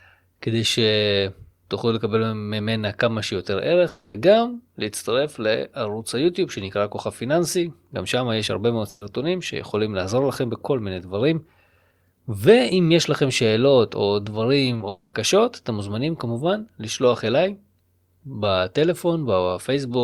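At 3.88 to 4.15 s the sound freezes into a fading held tone for about 260 ms and resumes further on with that stretch gone. This is most likely a long network dropout. Its length separates it from an ordinary loss burst.

From 8.89 to 9.02 s a burst of packet loss removes about 120 ms. The last sound is stretched and turned down, a held buzz or hiss, then the speech jumps ahead. It is a single gap shorter than the dropouts, not a repeated chopping.

Between 14.73 and 14.87 s repeated packet loss gives a choppy texture. Five gaps of no more than 20 ms each are patched, covering about 43% of the span. These are many tiny holes, not one long fill. Straight after, from 14.88 to 15.14 s, what is likely a second long dropout conceals about 250 ms and ends in a brief near-silence.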